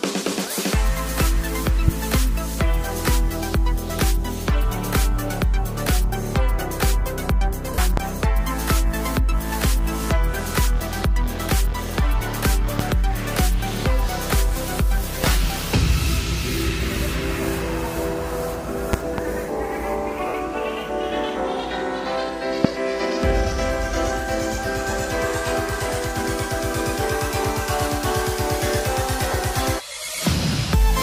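A loud pop hits at 1.88 s, sharp and well above the sound, likely a switching or static spike. At 7.74 s, 40 ms of lost LE Audio frames turn into a brief noisy smear as the decoder fills the gap. Another pop follows at 7.97 s, then more at 12.79 s and 15.24 s, and a double pop between 18.93 and 19.21 s. A 60 ms frame loss smears at 20.28 s, a pop lands at 22.65 s, and a short 20 ms loss comes at 29.32 s.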